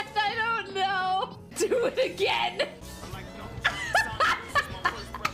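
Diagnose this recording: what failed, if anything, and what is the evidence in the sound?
Nothing failed here that I can hear; the audio holds steady the whole way, with no stage in the chain giving itself away.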